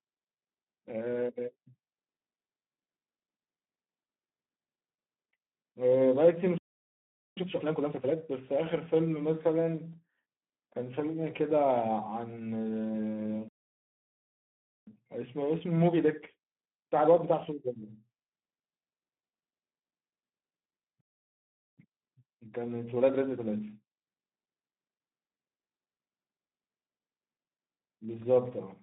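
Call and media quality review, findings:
Speex codec, whole clip: speech hoarse and buzzy, noisy, narrow line from 150 Hz to 3.6 kHz with nothing above 3.8 kHz. Coarse CELP excitation at a low setting, consistent with roughly 11 kbps Speex. Not enough bits to carry voice texture, so you get that rough, noisy edge. Band-limiting reads as a classic narrowband VoIP path.

Playback stall, three dropouts: 6.58–7.37 s (about 0.79 s), 13.48–14.87 s (about 1.39 s), 21.01–21.78 s (about 0.77 s). Speech just stops mid-flow into dead silence, then resumes. Likely the player starving for data or its output thread getting blocked.

Time-compressed catch-up right after each stall: 7.37–8.15 s at 2× (sounds properly rushed), 14.87–17.87 s and 21.78–24.78 s at 1.25×. Pitch stays put but pace jumps. The player is draining its backlog by cutting small chunks and cross-fading the seams.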